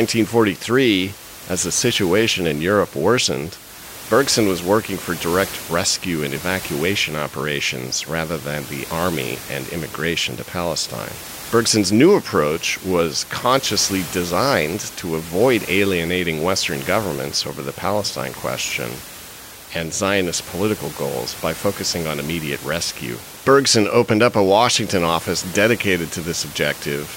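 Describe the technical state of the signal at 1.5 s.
At 1.5 s the signal is intact, with no fault present, and only the room's own background noise sits about 15 dB below the speech.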